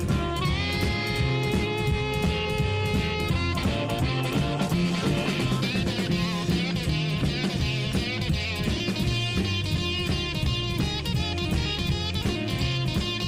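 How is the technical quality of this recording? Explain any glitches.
Nothing in the recording stood out as a technical problem on listening, so there are no glitches to explain.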